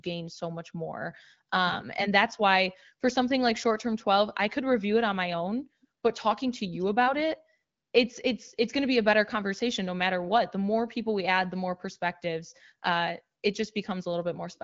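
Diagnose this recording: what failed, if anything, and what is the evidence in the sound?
Nothing in the recording has failed: it is speech carried by the AMR wideband (HD Voice) codec at 15.85 kbit/s, with the light coding texture expected at that rate and no content above about 7.5 kHz, all consistent with that codec working as designed.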